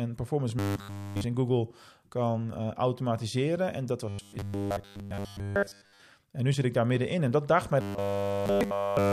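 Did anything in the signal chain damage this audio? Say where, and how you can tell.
Yes: robotic sound from repeated short buffers at 0.59–1.24, 4.09–6.02 and 7.81–9.13 s, a rigid 100 Hz buzz, likely buffer underruns looping 10 ms chunks.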